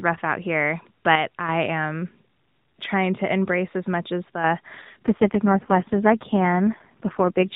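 Just after "embrace as much as", from 4.30 s to 4.44 s, the speech level falls abruptly by about 6 dB and then recovers. That step size is what a mono sum gives when one stereo channel vanishes, so the likely cause is a one channel drops out fault: the content shared by both channels loses half its contribution. Anything carried only in the missing channel is gone for those 0.15 s.

From 4.82 s to the end of the clip, the speech turns rougher, buzzier and more synthetic with no gap and no change in bandwidth. It still stops at 4 kHz as in the earlier narrowband mobile-codec audio. This is an AMR rate drop. The codec has fewer bits per 20 ms frame to describe the vocal tract and its excitation pulses, so the coarser result fits a step from 12.2 kbps down to 4.75 kbps, and it stays at that lower quality through to the end.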